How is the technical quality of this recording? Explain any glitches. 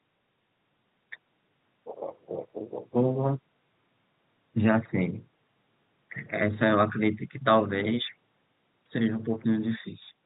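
Nothing in the recording counts as a glitch, so there's really nothing to flag here.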